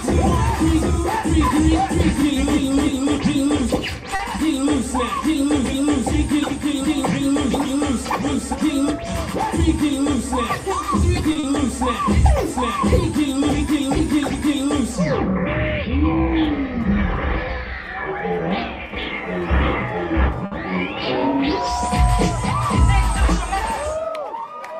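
A short stall from a late packet comes first, at 4.15 to 4.22 s. A packet missed its playout time and the jitter buffer ran dry, so the receiver held the last sound for about 40 ms until the packet turned up, then carried on from the same point. Nothing is lost, but the sound hangs briefly with a faint buzz, and playback now sits 40 ms later than before.

A jitter buffer speed-up follows from 9.81 to 11.27 s. The buffer had built up more audio than its target, and the receiver trimmed it back by cutting out many short pitch-period-sized slices in a row. In total only a few hundredths of a second are removed, and the pace rises by about 2% with the pitch unchanged.

Two more short stalls from a late packet come at 11.32 to 11.38 s, holding the sound for 30 ms, and at 20.46 to 20.55 s, holding it for 60 ms. Each is heard as a brief sustained smear with a slight buzz, and each pushes playback later by the length of the hold.

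A short concealed packet loss sits between those two stalls, at 11.39 to 11.46 s, right after the first of them. Here about 40 ms of audio never arrived in time to be decoded. The receiver filled the gap by extending the preceding sound and then crossfaded back into the real signal. It comes across as a quick wobble or smear.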